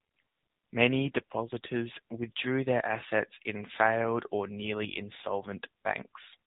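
Speech, carried throughout by an AMR narrowband mobile codec, and the damage is plainly audible. Nothing above 4 kHz survives, so sibilants and consonant edges are dulled into a boxed-in telephone band. The codec rebuilds the voice from a vocal-tract model excited by a handful of pulses per 5 ms subframe, and with this few bits the result has a buzzy, synthetic edge, which points to a low AMR-NB mode around 7.4 kbps.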